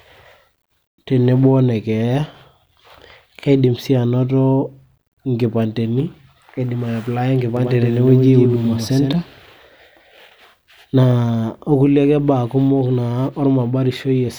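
From 7.57 s to 9.13 s the speech is heard twice: a doubled audio track, with a second full-band copy trailing the original by around a tenth of a second and sitting roughly 5 dB lower. The copy carries no reverberant tail or room colouring, so it reads as a hard, flat slapback rather than an echo, and it switches in and out abruptly at both ends. The likely cause is the same signal reaching the mix twice, once via a slower capture or processing path.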